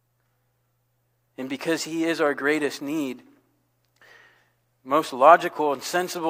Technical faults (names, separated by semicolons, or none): none